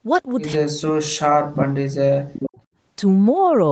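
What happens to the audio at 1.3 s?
At 1.3 s the speech is deeply attenuated, likely speech suppressed in double talk. Running from 0.55 to 1.57 s, the echo canceller mistook the talker for loudspeaker echo and cut the level by up to around 40 dB. The waveform shrinks sharply, and the spectrogram goes almost blank.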